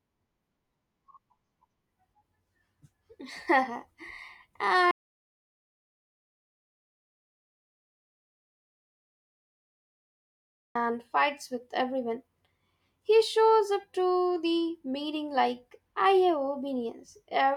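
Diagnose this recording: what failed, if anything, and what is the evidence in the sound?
Input was likely lost while the recorder kept writing silence: audio dropout to silence from 4.91 to 10.75 s, speech stopping dead with no room tone.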